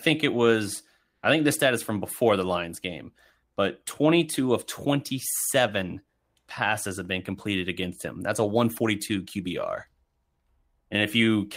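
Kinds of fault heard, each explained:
Nothing stood out on listening to this speech recording.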